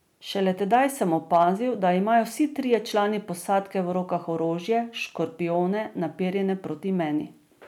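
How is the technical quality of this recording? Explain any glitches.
The recording has brief overload damage on a few speech peaks. Hard clipping occurs at 0.73 to 0.77 s, 1.34 to 1.48 s and 2.74 s. The signal exceeded the stage's limit by about 2 dB, and by about 1 dB at the last, so the peaks were sliced flat, adding high harmonics heard as short crackly roughness.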